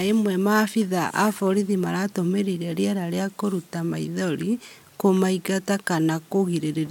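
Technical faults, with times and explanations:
No technical faults can be heard in this speech recording. There is nothing at any point in it that calls for a time or an explanation.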